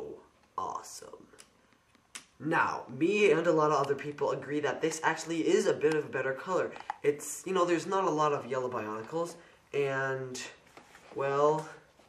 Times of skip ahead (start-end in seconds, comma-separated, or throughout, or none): none